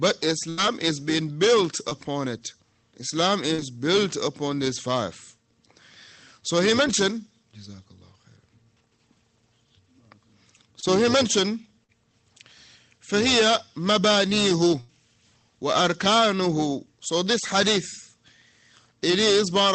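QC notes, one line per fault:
0.49–0.59 s and 14.80–14.90 s, burst of packet loss: about 80 ms of audio in a row never reached the receiver in time, twice. The receiver extended the last sound it had for roughly 80 ms while turning it down, so each gap comes across as a brief held buzz or fading hiss. The audio then picks up further along, with those 80 ms simply missing.
1.89–1.93 s, 3.55–3.60 s, 10.80–10.84 s, 11.84–11.90 s, short concealed packet loss: 20 ms of audio went missing at 1.89 s and 10.80 s, and 40 ms at 3.55 s and 11.84 s. The receiver patched each hole by carrying the preceding sound forward, either from its pitch or as shaped noise, then blended back into the real stream. Each patch is heard as a quick smear or wobble. This all passes through an Opus call path whose top end stops near 8 kHz.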